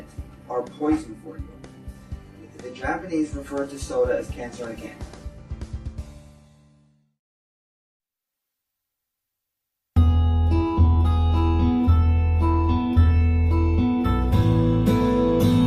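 No technical faults are audible.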